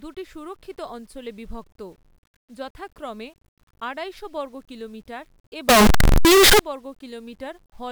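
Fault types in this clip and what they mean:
Signed and unsigned mixed up: a stretch of loud, harsh distortion with soft parts as loud as strong ones, likely a sign mix-up fitting 8-bit samples.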